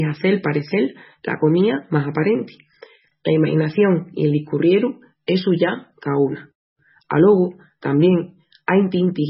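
Throughout, the speech sounds watery and swirly with nothing above 5.6 kHz, likely MP3 compression at a very low bitrate, fitting roughly 16 kbps.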